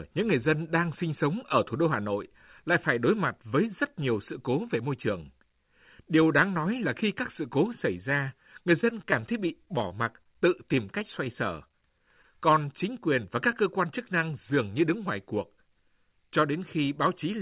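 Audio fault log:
8.81–10.26 s, repeated packet loss (robotic sound): eleven dropouts up to 18 ms, each patched by repeating prior audio, giving choppy tone; spectrogram shows smeared, frozen harmonic stripes.
11.00–12.38 s, scattered short gaps: roughly seven isolated holes of up to about 20 ms, filled by extending the last sound, heard as brief hiccups; waveform shows short repeated cycles.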